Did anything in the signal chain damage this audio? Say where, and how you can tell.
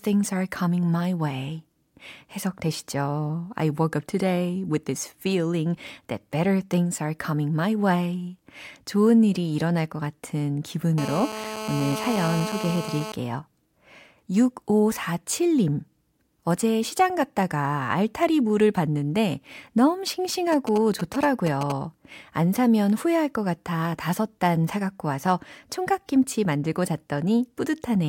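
Yes. GSM phone buzz enters the analogue wiring at 10.98–13.12 s, after "일이 일어날 것 같은": a steady, raspy 217 Hz buzz, about 8 dB below the speech. The circuit is rectifying a nearby phone's continuous call transmission.

GSM signalling bursts, also in the analogue wiring, appear at 20.52–21.72 s, between "알타리 물을 봤는데 너무" and "안 사면 후회할 것". A galloping pattern of short 217 Hz buzzes, roughly 10 dB down, comes from rectified signalling pulses.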